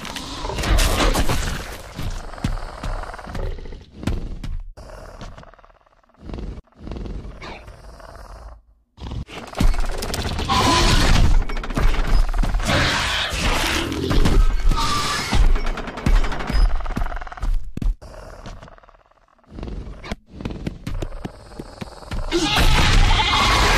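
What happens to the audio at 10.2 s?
A short run of compressed frames was delivered twice, so the decoder plays the 69.7 ms block from 10.22 to 10.29 s a second time, a length that fits three frames. The sound stutters briefly there, and the clip grows by about 70 ms.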